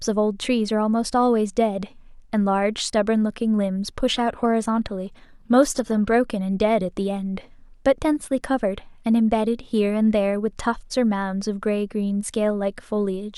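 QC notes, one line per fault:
4.08–6.08 s, adaptive stream at a lower bitrate: for two seconds the speech abruptly loses its clean upper band. The treble turns hazy and synthetic, with a swirly, metallic sheen and more audible coding artefacts, then snaps back at 6.08 s with no gap at either edge. The seamless switch points to the player dropping to a low-bitrate rendition, roughly 24 kbit/s HE-AAC with rebuilt high frequencies, from a higher-rate AAC stream.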